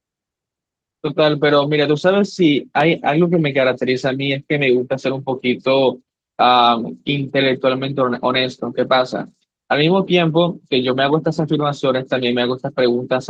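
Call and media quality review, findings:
Loud pop at 2.80 to 2.83 s. Single sharp transient, peaking around 5 dB above the speech, which carries on underneath. Likely a voltage step from a plug, switch, static discharge or driver glitch. Downstream circuitry shapes it into one short thump.

Lost packets rebuilt from error correction, clustered between 8.15 and 9.06 s. Run of brief rough, noisier patches of about 20 ms each, fitting 20 ms Opus frames. No gaps. The decoder played the low-bitrate copies carried in following packets. The event at 8.71 s runs longer, to 8.81 s.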